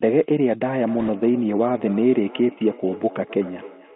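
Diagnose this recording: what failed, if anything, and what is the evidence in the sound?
Two things run through the whole clip. The first is a switching supply whistle: a thin, high tone wandering between about 10.8 and 12.7 kHz, sitting around 45 dB under the speech. Since the headset path can't pass anything near that high, it's getting in after the codec, on the analogue or playback side. A switching regulator is dropping into an audible burst mode there, and its pitch shifts as the load moves.

The second is the Bluetooth CVSD headset codec, and the damage is plainly audible. The band is squeezed to roughly 200 Hz to 3.4 kHz, the sibilants come out scratchy, and there's a grainy hiss under everything. That fits the 64 kbit/s CVSD link. It sends one up-or-down bit per sample and adapts its step size, so fast, loud high-frequency content outruns the step and distorts.

From 0.79 s to the end there's a feedback echo between two devices, a call-processing failure. 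Each phrase comes back roughly every third of a second, peaking about 20 dB below the direct speech and getting thinner and more ringing on each pass. Two devices in the same room are on the call, one is playing the other's mic feed, and that mic hears it again. Each echo canceller only removes what its own device plays, so nothing breaks the loop.

Between 1.00 and 1.09 s there's a burst of bit errors on the Bluetooth voice link. You hear a short rush of crackly noise laid over the speech, with no hard clicks. That points to errors on the radio link flipping a couple of percent of the bits. Every CVSD bit carries the same small weight, and the decoder's errors fade out quickly, so the damage comes through as smeared noise rather than pops.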